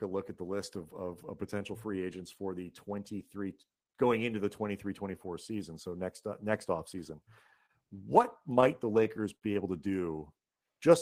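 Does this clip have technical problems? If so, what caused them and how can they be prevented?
Yes. At 7.66 s a sound is briefly held for about 29 ms before the speech carries on, with nothing lost. This is a short stall from a late packet: the jitter buffer ran dry, the receiver stretched the last sound until the packet came, and the delay grew by 29 ms. A larger jitter buffer would absorb a wait of this size.

From 8.23 to 9.44 s the speech drags and stutters in eight small hitches, the longest lasting 58 ms. This is repeated stalls (stutter): packets kept arriving late, the buffer emptied over and over, and about 130 ms, roughly 11% of that stretch, was filled by continuing earlier sound. Steadier network delivery with less competing traffic would prevent it.

Between 10.12 and 10.91 s the speech slows to about 93% speed at unchanged pitch, with drawn-out sounds. This is a jitter buffer slow-down: to rebuild its reserve, the receiver repeated pitch periods and pause fragments, adding 62 ms. 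A buffer kept closer to its target depth would not need this catch-up.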